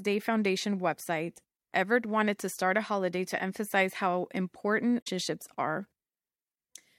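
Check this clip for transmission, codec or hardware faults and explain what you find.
One fault is present: damaged data in a compressed stream, from 4.98 to 5.07 s in the speech. For about a tenth of a second the decoder receives corrupted frames. It misreads them, loses sync, and searches for the next valid frame header, so the speech breaks into a short chirp, squawk, click or hole. On a spectrogram this appears as a narrow vertical disruption cutting through the harmonic pattern. On the waveform it shows as an abrupt, jagged discontinuity at that point.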